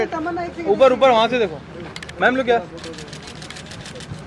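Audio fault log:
Nothing to log here; this one sounds fine all the way along, with no trouble to report.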